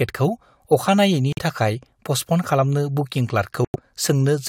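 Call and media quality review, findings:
Bluetooth dropout, 1.33–1.39 s and 3.65–3.76 s: silent holes in the speech, roughly 60 ms and 120 ms. Speech resumes further on, as if it had kept playing. Likely cause: wireless link to headphones, late packets dropped; gaps fit two and four lost frames.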